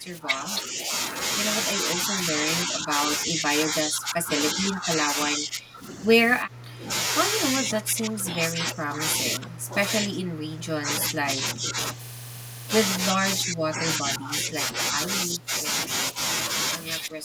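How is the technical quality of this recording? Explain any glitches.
The recording is marred by repeated level dips throughout. Speech suppressed in double talk occurs at 0.00–0.89, 1.83–6.04, 6.41–6.91, 7.58–11.77, 13.12–15.65 and 17.09 s to the end. The speech sinks by around 10 to 15 dB, in pieces totalling about 8.7 seconds. The likely cause is an echo canceller that could not separate the near talker from returning far-end audio during overlapping talk, so it turned everything down.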